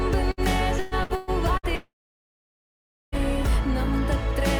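Right at 0.31 s there's a burst of packet loss lasting until 0.40 s. About 60 ms of audio never arrived, so the receiver stretched out the last bit of sound and faded it before playback picked up again further along, with that slice simply gone.

From 0.79 to 1.66 s it turns choppy and robotic. That's repeated packet loss, with four separate holes, the longest around 120 ms. Roughly 360 ms went missing in total, so about 41% of that stretch is patched-over continuation rather than real audio.

Then from 1.75 to 3.15 s the sound stops for about 1.4 s. The held-over tail fades fast, and most of that time, around 1.24 s, is just silence before things resume past the lost part. That's likely a long network dropout.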